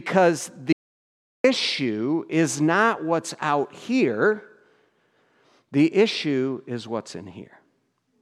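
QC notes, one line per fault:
0.73–1.44 s, audio dropout to silence: the speech cuts off abruptly and the track falls to complete silence for about 0.72 s, with no room tone or background hiss underneath, then resumes mid-flow as suddenly as it stopped. Whatever was spoken in that stretch is simply missing. The dead-flat gap points to the input signal being lost for a moment, likely a brief disconnection or mute, while recording carried on writing silence.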